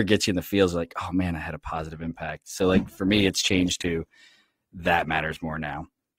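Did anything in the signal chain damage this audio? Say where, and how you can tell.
Yes, at the network stage, through the codec. At 1.7 s, just after "man I had a", the quality of the speech changes suddenly. Codec artefacts rise, and the degradation lasts to the end of the clip. There is no gap at the switch. That is an adaptive stream at a lower bitrate: the connection slowed, so the player moved to a leaner encoding. The sound fits a step from about 64 kbit/s Opus to about 16 kbit/s.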